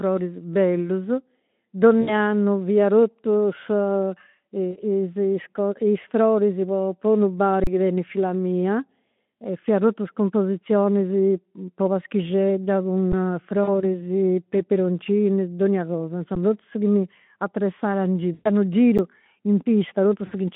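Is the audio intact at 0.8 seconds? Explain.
Yes, the audio is intact at 0.8 seconds, with no fault at that moment.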